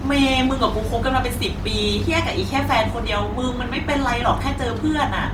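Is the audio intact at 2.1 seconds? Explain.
No. At 2.1 seconds the speech sounds grainy and rough, with a noisy, plainly audible gritty texture laid over it rather than dropouts, and the top end still reaches to about 20.1 kHz. The damage runs through the whole clip. This is likely Opus compression in its music (CELT) mode at a low rate, consistent with about 24 kbps. Short of bits, the encoder keeps each band's energy but fills detail with folded or noise content.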